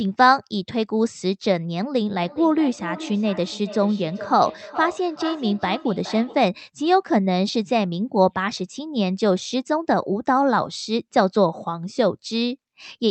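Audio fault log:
2.19–6.53 s: feedback echo between two devices. A second device in the room plays back this microphone's signal, which the microphone picks up again, and neither echo canceller removes it. The speech returns roughly every 0.4 s, thinner and ringing, peaking about 13 dB below the speech.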